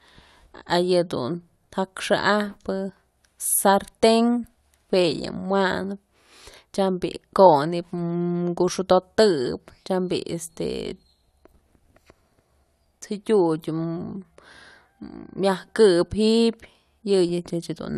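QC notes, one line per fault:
No faults found in the speech. Nothing here needs a QC note.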